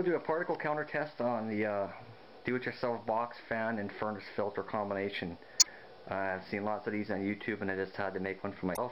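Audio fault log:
5.58–5.67 s and 8.71–8.78 s: damaged data in a compressed stream. Two short bursts, roughly 95 ms and 66 ms long, where the sound breaks up. Corrupted bytes in the encoded stream leave the decoder unable to read those frames correctly, so it outputs garbled samples and loses sync, then scans for the next valid frame header before clean playback resumes.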